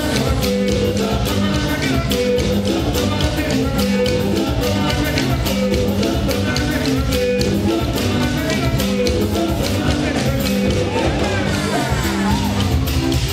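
No technical faults are audible.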